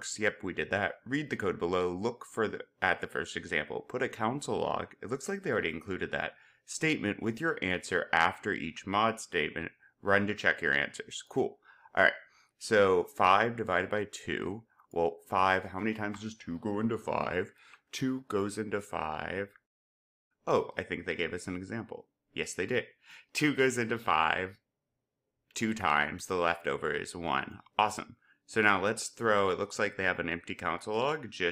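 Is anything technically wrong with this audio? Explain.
No, nothing technically wrong can be heard in this audio; the signal stays intact and consistent throughout.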